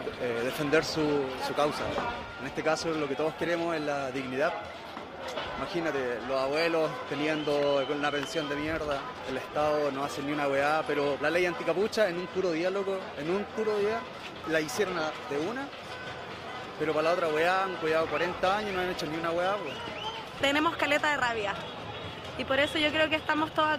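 No technical faults can be heard anywhere in the audio.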